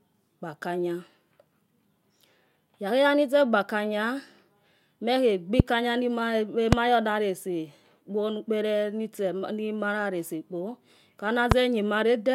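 Three loud pops hit the speech at 5.60–5.62 s, 6.73–6.75 s and 11.52–11.54 s, each a single sharp thump roughly 25 dB above the speech, which carries on underneath. They're likely voltage spikes from a switch, plug or static.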